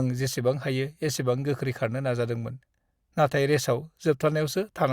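No technical faults are audible anywhere in the speech recording.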